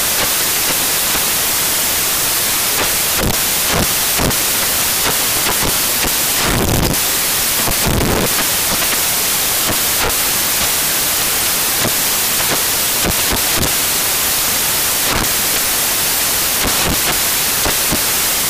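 Speech, but under loud, harsh broadband noise the whole way through, a classic case of samples built from the wrong bytes: the fast-flipping low bits are landing in the high end of each value.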